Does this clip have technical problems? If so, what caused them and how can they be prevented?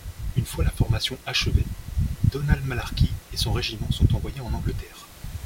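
No, the speech signal shows no technical problems, and the only other sound is the recording room's own background noise, sitting about 25 dB below the speech, which belongs to the recording rather than to any fault in the system.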